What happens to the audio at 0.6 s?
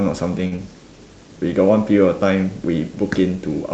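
Just before 0.6 s, from 0.56 to 0.60 s, there is a brief smear or wobble where the sound is continued artificially rather than heard as spoken. This is short concealed packet loss: about 20 ms of speech never reached the decoder in time, and the receiver filled the gap with roughly 19 ms of synthesized continuation, extending the last voiced pitch or shaped noise, before blending back into the real signal. Any short consonant there may be lost.

Immediately before that, from 0.47 to 0.54 s, a sound is held slightly too long, with a faint buzz or dip. This is a short stall from a late packet: the jitter buffer ran dry, so the receiver stretched the preceding sound by 44 ms until the packet arrived, then resumed from the same point. Nothing is lost, but playback now runs 44 ms later than before.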